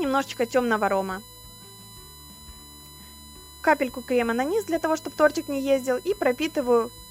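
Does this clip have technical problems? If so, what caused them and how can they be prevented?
Yes. The clip has USB whine throughout. Current drawn by the USB bus in 1 ms frames leaks into the audio path through the shared power or ground, so the bus timing becomes an audible tone. Here it sits at a fixed 1 kHz with its harmonics, strongest at 4 kHz, roughly 25 dB below the wanted signal. To prevent it, power the interface separately or add a ground-loop isolator or ferrite on the USB line.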